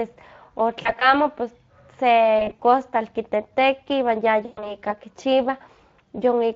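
Speex codec coding runs through the whole speech clip. Its damage is plainly audible: the voice has a hoarse, grainy edge, which fits a mid-range Speex setting of roughly 20 kbps. Unlike MP3 or AAC artefacts, there is no swirly, watery smearing. The roughness sits in the excitation of the voice itself, in the way a CELP coder with a tight bit budget sounds.

VoIP packet loss concealed by the speech codec breaks in three times: 0.81 to 1.14 s, 2.39 to 2.62 s, and 4.45 to 4.75 s. In the first two, about 100 ms of audio is missing, spread over roughly 200 ms, with no gap longer than 40 ms. The third loses about 120 ms. Silent dropouts or clicks would leave holes, but here the decoder fills them by repeating its last pitch and filter. The speech stretches into a fading buzz or coloured noise and stays weak and distorted for a moment after the stream resumes.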